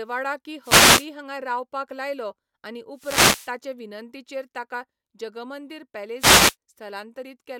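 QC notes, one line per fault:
0.62–1.08 s: wireless microphone noise hit. A short burst of static swishes over the speech just before "हांगा रावपाक लायलो आनी", as the radio link from an analogue FM microphone fades and the receiver's noise floor rises through the signal.
2.94–3.55 s: wireless microphone noise hit. The longest of the three, about 0.6 s, between "हांगा रावपाक लायलो आनी" and "विनंतीचेर ताका जगमंदिर". Receiver noise rises as the signal fades, which is what happens when reflected paths cancel the carrier at the receiver.
6.18–6.56 s: wireless microphone noise hit. A brief swish after "विनंतीचेर ताका जगमंदिर", again receiver noise coming up as the FM signal momentarily drops out.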